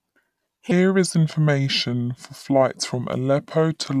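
Wrong sample rate, from 0.71 s to the end: the samples are being clocked out slower than they were captured, with no resampling in between. Everything runs at about 0.726 times normal speed, and pitch drops by about 5.5 semitones in the same proportion, which fits audio recorded at 44.1 kHz but played at 32 kHz. The speech turns deep, heavy and dragging, with vowels stretched and consonants blunted.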